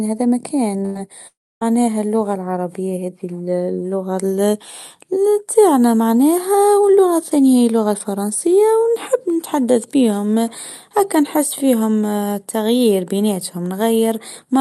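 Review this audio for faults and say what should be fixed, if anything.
A burst of packet loss runs from 0.85 to 0.98 s. About 100 ms of speech never arrives, and the receiver stretches the last sound into a fading buzz or hiss. On a spectrogram this shows as smeared, repeated harmonics that darken toward the end, and the waveform shows a looping, decaying envelope. Larger jitter-buffer depth or redundancy across consecutive packets would prevent it.

A lost packet rebuilt from error correction appears twice, at 0.95 s and at 1.61 s, and each lasts 20 ms. The decoder plays the low-bitrate copy carried in the next Opus packet, so there is no gap, only a brief rough, noisier frame. A spectrogram shows a thin, grainier slice with slightly blurred harmonics. Raising the error-correction bitrate budget would make these frames cleaner.

A long network dropout, likely caused by a connection stall, runs from 1.27 to 1.64 s, ending just before "اللغه العربيه". 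First a fading buzz or hiss fills the gap, then about 270 ms of near-silence follows. The waveform flattens almost to zero, and the spectrogram shows a blank band before speech resumes abruptly. A more stable network path or faster recovery signalling would prevent it.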